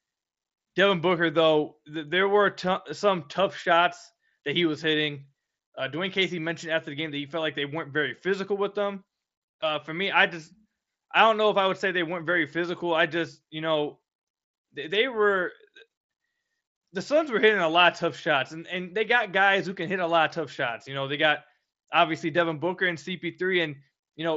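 No faults in this speech clip; it has the 8 kHz top end and faint grain on louder syllables expected of the mSBC Bluetooth headset codec path.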